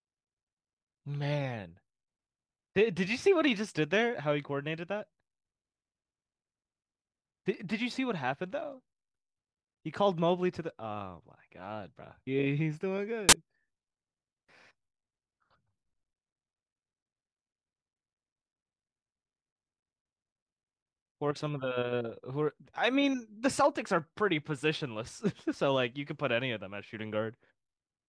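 At 13.29 to 13.33 s, file tags get played as audio: embedded cover-picture data is read as samples, giving a hard-edged burst of very loud white noise.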